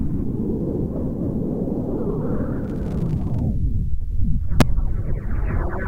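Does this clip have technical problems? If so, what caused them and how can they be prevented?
Yes. At 4.61 s, a peak about 1 dB over the limit causes integer overflow. Instead of being held, the value wrapped to the opposite sign and swung across the full range, producing a violent crack much sharper than clipping's flattened peaks. Saturating arithmetic or limiting before conversion prevents it.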